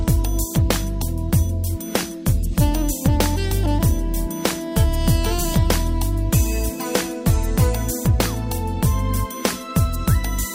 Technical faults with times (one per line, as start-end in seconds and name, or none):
none